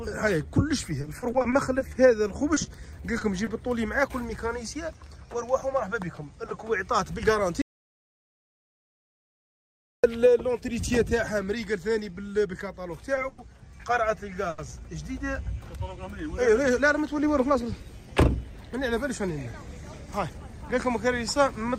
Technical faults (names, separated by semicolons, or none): repeated packet loss (robotic sound); jitter buffer speed-up; audio dropout to silence; short stall from a late packet